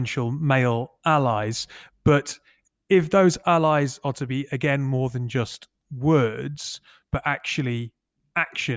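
Nothing in the speech here sounds like a technical fault at any point in the recording.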